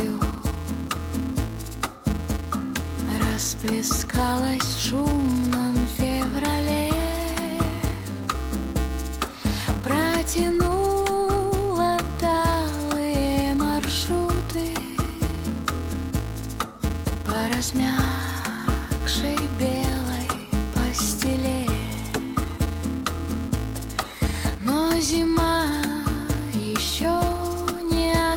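A steady buzz at 375 Hz runs through the whole clip, rising and falling with the loudness of the sound beneath it. This is a filter restarted on every block. The filter loses its stored state at each block boundary and begins again from silence, leaving a small transient at the start of every block. Those repeated clicks merge into a tone at the block rate, which fits a 128-sample block.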